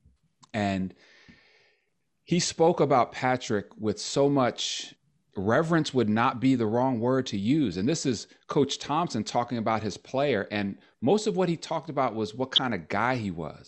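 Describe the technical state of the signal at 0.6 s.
Dull, gurgling and grainy speech with flickering highs, here as throughout, likely MP2 compression at a low rate, perhaps around 80 kbps, switching off upper sub-bands.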